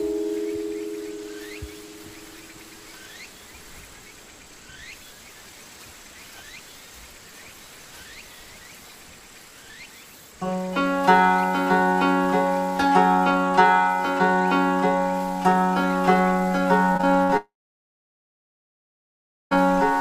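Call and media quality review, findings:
Choppy, robotic stutter, 16.93–17.31 s: repeated packet loss (robotic sound). Four gaps, longest 60 ms, each patched by repeating prior audio; roughly a third of the span is concealed.

Short fading buzz, then about 2.0 s of silence, 17.37–19.57 s: likely a long network dropout. The receiver extended the last sound, then muted, and the lost stretch never played.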